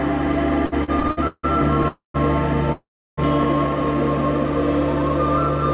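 From 0.66 to 1.45 s the music hits repeated stalls, a stutter: seven little gaps where packets came in late and the jitter buffer kept running dry. The receiver stretched the last sound to cover them, about 352 ms in all, the longest 162 ms, so nearly half that stretch is filler and the music drags and hiccups.

Then there are two call audio freezes, at 1.88 to 2.16 s and 2.72 to 3.19 s. Each starts as a fading buzz or hiss that drops to silence, about 140 ms in the first and 330 ms in the second. Packets were likely held up in transit, emptying the buffer, and the music resumes where it stopped, now 263 ms and then 452 ms later, over the narrow G.711 call sound with nothing above 4 kHz.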